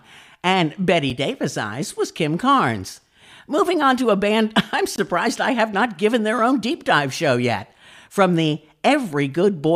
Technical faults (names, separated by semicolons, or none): block of digital silence